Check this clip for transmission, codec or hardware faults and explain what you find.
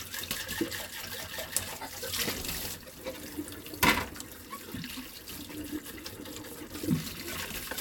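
Nothing stood out on listening to this audio; no transmission, codec or hardware problem could be heard anywhere in it.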